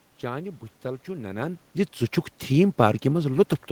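No technical faults are audible.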